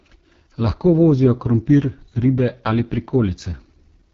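The whole clip carries the sound of the AMR wideband (HD Voice) codec run hard: speech turns rough and raspy, nothing survives above 7 kHz, and the damage is heavy enough to point to the lowest 6.6 kbit/s mode, where the vocal-tract model gets too few bits.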